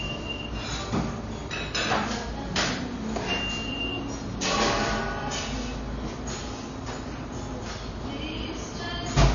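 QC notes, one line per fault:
Throughout: MP3 compression. Nothing is heard above 7 kHz, and the audio has a plainly audible watery, swirling texture. Weak frequency detail flickers in and out between frames. The likely cause is MP3 encoding with too few bits, which fits a bitrate near 32 kbps.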